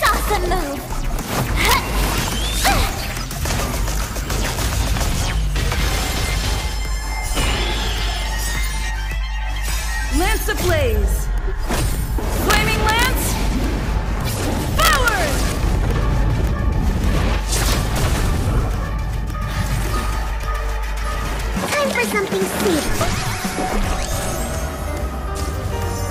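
Violent, sharp cracks break out on loud peaks at 0.06–0.09 s, 1.65–1.74 s, 2.65–2.72 s, 10.69 s, 12.50–13.06 s, 14.80–15.08 s and 17.72 s. This is integer overflow: peaks driven up to about 4 dB past the integer limit wrap to the opposite sign instead of being held at the limit.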